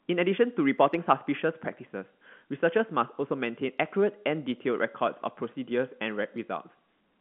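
No technical faults are audible.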